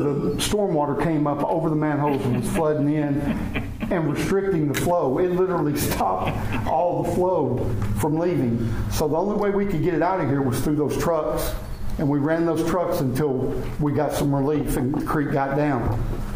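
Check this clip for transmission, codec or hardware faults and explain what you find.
No transmission, codec or hardware faults are audible anywhere in the clip.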